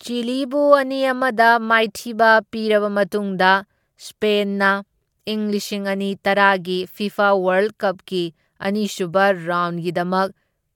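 A speech recording with no technical fault to point to anywhere along its length.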